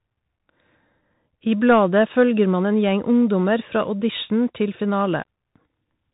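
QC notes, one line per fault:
Throughout: Bluetooth CVSD headset codec. Nothing passes above 3.8 kHz, so the speech sounds narrow and boxy. Each sample is one up-or-down step, so loud high sounds outrun it and distort, with scratchy s sounds and granular hiss. This fits a 64 kbps link.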